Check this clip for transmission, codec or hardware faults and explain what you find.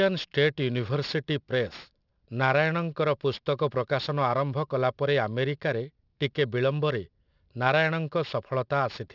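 Aliasing runs through the whole clip. The speech was resampled without an anti-aliasing filter, which points to a drop to a 12 kHz rate. Energy above 6 kHz folds back down as gritty, metallic hiss, roughly 25 dB below the speech. A clean low-pass would just sound dull, with nothing false added near the band edge.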